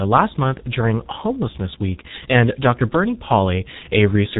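Throughout the recording, the speech has passed through the G.723.1 codec, a low-rate telephony coder whose heavy damage fits a bitrate of roughly 6 kbit/s. It works in long 30 ms frames and refreshes its model of the voice only slowly, so quick changes between sounds get smeared together. Nothing survives above 3.8 kHz. The result is muffled, hoarse speech with blurred, indistinct consonants from start to finish.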